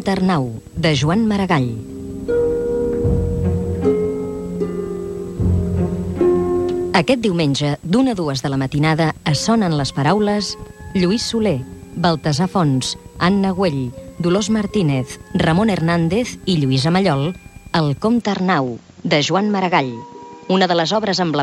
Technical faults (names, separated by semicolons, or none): input switched to a poorer device